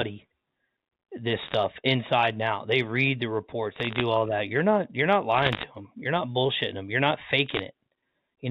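Bit errors on a digital phone line flip individual bits in the 8-bit logarithmic samples of the G.711 mu-law stream. Each error corrupts a single sample, and a hit on an upper bit, or on the sign bit of a loud sample, throws that sample far from its true value, producing a sharp tick. Four bursts occur, at 1.39 to 1.54 s, 3.74 to 4.01 s, 5.34 to 5.63 s and 7.46 to 7.62 s. Each has an error rate somewhat under 1 percent and is heard as a brief spell of crackle laid over the speech, which itself remains unchanged.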